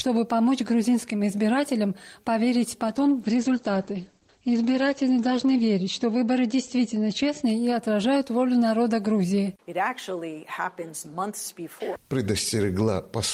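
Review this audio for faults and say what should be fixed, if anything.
A call bitrate drop runs from 2.88 to 7.49 s: the encoder coarsens and its bandwidth narrows from 20 kHz to 8 kHz, which fits a fall from roughly 32 to 12 kbps, bottoming out for about 2.8 s. On a spectrogram, energy above 8 kHz vanishes abruptly. Smoothing the bandwidth estimator and adding congestion headroom would prevent it.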